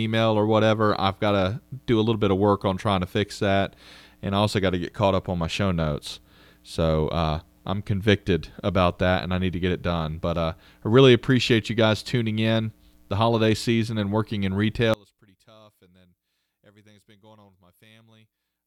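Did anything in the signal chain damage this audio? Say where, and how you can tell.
Yes. One channel inverted, 14.94 s to the end: in mono the speech falls about 30 dB as shared content cancels, likely reversed-polarity analogue wiring.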